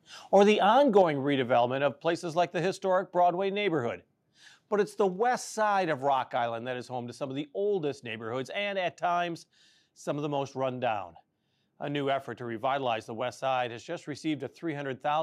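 At 0.36 to 0.38 s and again at 0.96 to 1.02 s, the microphone input gain was likely set too high, driving peaks about 1 dB and about 2 dB past the converter's ceiling. These are microphone overload. A few percent of samples are flattened, giving those loudest moments a brief harsh crackle.

Right after the second overload, at 1.02 s, and again at 5.16 s, the call software likely reduced the microphone volume in a single step, by about 5 dB and then about 2 dB. This is microphone volume stepped down. The speech and background both drop abruptly in level at those instants.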